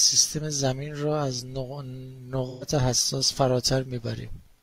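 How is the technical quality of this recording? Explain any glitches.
One glitch stands out in this speech recording. From 2.48 to 2.64 s the sound turns briefly smeared and noisy, a phasey patch rather than a clean gap. This is AAC frame loss with concealment. About 128 ms of coded audio went missing, which fits three lost frames, and the decoder filled the hole by reusing the last good spectrum.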